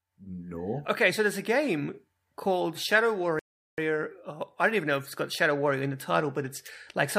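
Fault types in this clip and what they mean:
Rebuffering stall: at 3.39 s the speech stops dead and the playback falls silent for about 0.39 s, until 3.78 s, because the player exhausted its downloaded audio and had to wait for more data. When the sound returns, it picks up at the exact point where it halted, so nothing is skipped and the clip simply runs longer. A dropout would instead lose the missing stretch and jump ahead.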